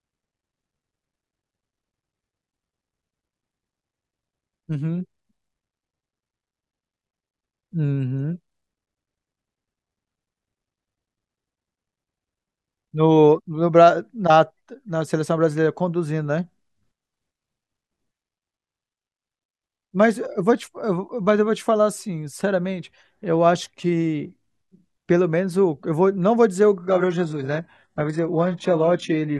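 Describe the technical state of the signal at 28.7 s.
Adaptive stream at a lower bitrate, from 26.79 s to 29.40 s: the connection slowed, so the player swapped mid-stream to a much leaner encoding, consistent with a drop from roughly 96 to 12 kbit/s. The change is abrupt and gapless, and codec artefacts rise.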